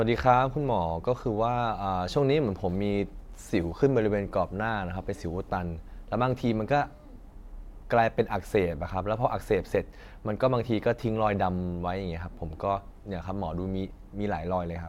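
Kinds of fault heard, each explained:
Nothing to flag here: no technical faults turn up anywhere in this bit of speech.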